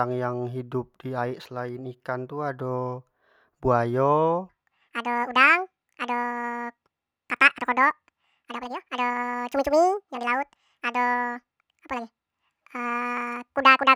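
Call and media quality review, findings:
Section at the wrong speed, 4.49 s to end of clip: speech abruptly runs fast and high, 1.9x speed with pitch raised about ten semitones. Likely resampling or playback clock mismatch in editor or player; speed and pitch shift together.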